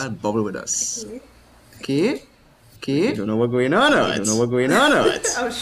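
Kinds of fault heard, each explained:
Doubled audio track: a second full-band copy of the sound runs about a second behind at roughly equal level, with no decay or room colour. That sets it apart from echo or reverb, and it likely comes from a slower capture path or misaligned edit copies.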